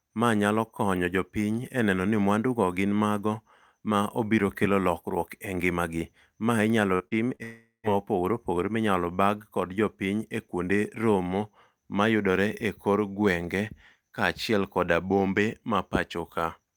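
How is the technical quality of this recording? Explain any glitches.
The recording has a cluster of glitches around 7 seconds. Short concealed packet loss at 6.95–7.03, 7.08–7.14 and 7.35–7.42 s: about 40 ms of lost audio was filled by extending the preceding speech, giving brief smears rather than gaps. At 7.43–7.86 s a likely long network dropout leaves roughly 0.4 s missing. Unlike the short losses, the fill fades into about 0.14 s of silence before speech resumes.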